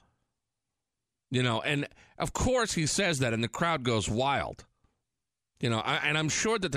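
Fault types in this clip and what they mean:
No technical fault can be heard anywhere in this speech recording. Nothing in the audio breaks up, drops out or changes character at any point.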